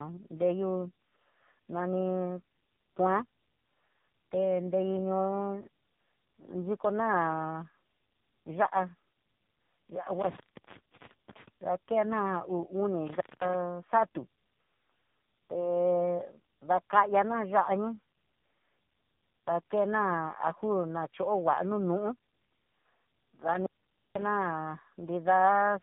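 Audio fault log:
throughout, tandem speech coding: rough, muffled and warbly speech with nothing above 3.7 kHz, consistent with three speech coders in series, each re-encoding the previous one's degraded output.
10.20–11.48 s, 13.07–13.54 s, 23.53–24.28 s, intermittent contact: crackle-edged dropouts, open about 0.89 s, 0.21 s and 0.49 s, where a loose connection briefly breaks the signal path.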